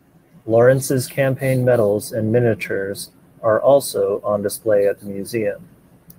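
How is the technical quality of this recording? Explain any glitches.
No technical glitches are audible.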